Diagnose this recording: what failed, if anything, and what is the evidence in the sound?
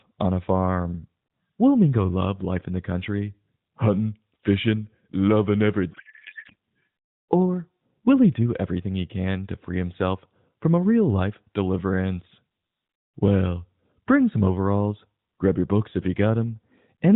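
Codec payload misread, from 5.92 to 6.55 s, right after "fishing loving every", at the codec stage. For about 0.64 s the speech gives way to garbled noise and warble that barely tracks it. The decoder is unpacking frames whose bit fields sit in the wrong positions, which fits octet-aligned AMR being read as bandwidth-efficient. Every frame still decodes as valid, so nothing drops out. Around the fault, the AMR narrowband codec's light 4 kHz-limited character at about 12.2 kbps continues.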